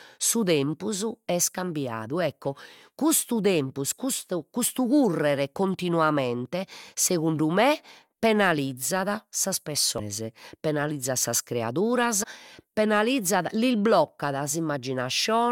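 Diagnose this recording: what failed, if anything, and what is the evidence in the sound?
The failure sits at the codec stage and is damaged data in a compressed stream. A brief blip lands at 9.98 s, just after "segundu me penalizzat sas", and a second short disturbance runs from 12.22 to 12.24 s, immediately before "penalizzat lis". Both events last about 20 ms or less. Corrupted bytes in the encoded stream make the decoder misread those frames, so it briefly loses sync and then resynchronises on the next valid frame header.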